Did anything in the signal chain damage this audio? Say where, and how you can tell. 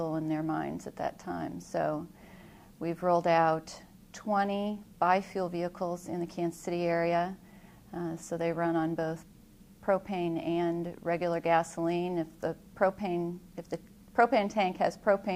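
No, nothing along the signal chain has left an audible mark on this audio, and the signal stays intact at every stage it passes through.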